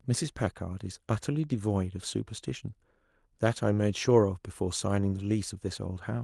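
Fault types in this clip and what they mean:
There are no fault types in this clip.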